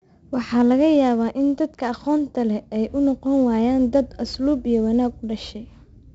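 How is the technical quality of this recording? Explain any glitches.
The recording is noticeably degraded throughout by 4-bit ADPCM compression. Each sample is coded as a coarse 4-bit step from a prediction, so the error rides on the speech as a gritty hiss that rises with loudness and roughens sharp attacks. Nothing reaches above about 7.7 kHz, which dulls the sound and fits a 64 kbps stream at a low sample rate.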